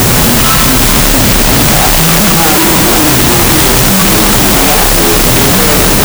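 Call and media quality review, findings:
Loud hiss with the sound buried underneath, half speed and an octave low, throughout. Wrong sample width: 16-bit integer data read as unsigned 8-bit, each byte treated as a sample.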